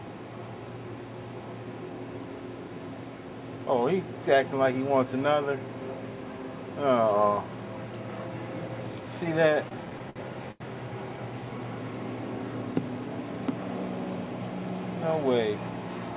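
Between 9.64 and 10.62 s, packets reached the receiver late or more slowly than they were played out, so the jitter buffer ran dry seven times, producing repeated stalls (stutter). Each time, the receiver stretched the last sound to bridge the gap, the longest wait being 86 ms, and about 202 ms in all was filled this way, roughly a fifth of that stretch. Nothing drops out, but the audio drags and hiccups there, over a call path band-limited to 4 kHz.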